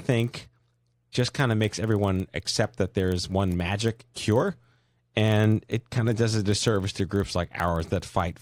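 Running under the speech for the whole clip is a steady buzz at 25 Hz, a rapid train of ticks that swells when the talker is loud and fades in quieter stretches. The fault is a filter restarted on every block: it discards its internal state at each block boundary and begins again from silence, so every 40 ms block opens with a small transient, and those repeated transients form the buzz.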